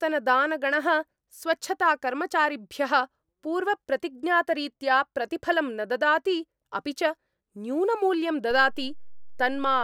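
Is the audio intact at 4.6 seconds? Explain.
Yes, the audio at 4.6 seconds is intact, with no audible fault at that moment.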